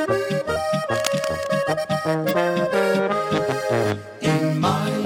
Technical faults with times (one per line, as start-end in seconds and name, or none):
0.51-0.57 damaged data in a compressed stream
0.89-1.51 cable scratch noise
2.28-2.34 damaged data in a compressed stream